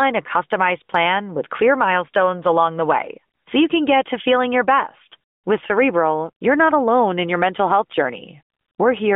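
No technical fault can be heard in this speech, which carries the band-limited sound of the AMR narrowband mobile codec, roughly 200 Hz to 3.6 kHz, with only the light coding texture that fits its 12.2 kbps mode.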